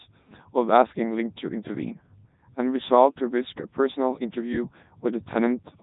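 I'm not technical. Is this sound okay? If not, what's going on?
No, it isn't. From start to finish, the speech has gone through a Codec 2 vocoder, a very low-data codec built for digital radio. It doesn't send the actual sound. It sends a rough sketch of the voice (pitch, loudness and general tone), and the other end rebuilds it from simple tones. That's why it sounds robotic and buzzy, with heavy damage throughout and nothing above 3.8 kHz, so it's also dull.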